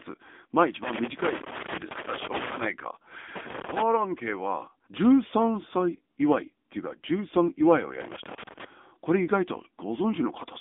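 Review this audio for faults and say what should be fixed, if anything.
Loose connector crackle at 0.84–2.64 s, 3.36–3.82 s and 8.01–8.65 s: a moving contact repeatedly breaks the speech, leaving broadband vertical spikes on the spectrogram and jagged dropouts in the waveform. Reseat or replace the cable and clean the contacts.

AMR narrowband mobile codec damage throughout: buzzy, synthetic speech confined to roughly 200 Hz–3.6 kHz, which fits a low AMR-NB mode near 8 kbps. The spectrogram is blank above 3.7 kHz. Record directly or over a wideband link instead of a narrowband mobile call.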